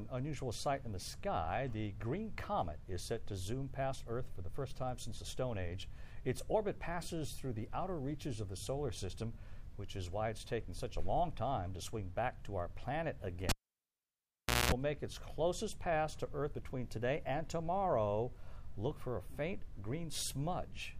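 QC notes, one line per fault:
13.49–14.72 s, cable pulled and plugged in: pop spike, 1.18 s near-flat waveform gap, 0.21 s of 60 Hz buzz as harmonic stripes while the tip touches, final pop.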